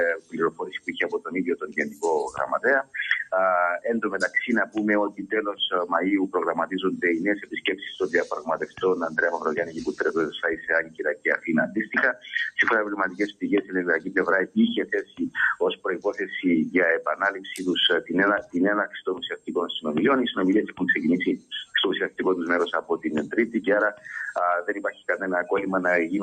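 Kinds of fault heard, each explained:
Noise suppressor applied to music or sounds: A noise suppressor designed for speech stayed active across the whole clip, treating steady tones and ambience as noise. Its gain keeps moving by around 10 dB, so sustained parts and tails dip and recover, making the sound pump and thin while attacks survive.
Sound cut by the noise suppressor: The suppressor misread parts of the sound as noise and turned them down harder, by up to about 16 dB, in five stretches between 0.15 and 25.09 s. Held and fading sounds sink or lose their decays, adding up to several seconds.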